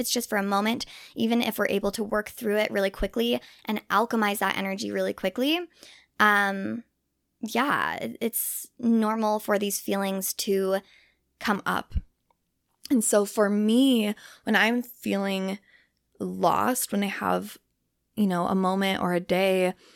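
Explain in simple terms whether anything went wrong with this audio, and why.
A wrong sample rate problem affects the first 11.6 seconds: the audio is played back faster than it was recorded, with no conversion. Speech runs about 9% fast and about one and a half semitones high, which fits 44.1 kHz audio played at 48 kHz.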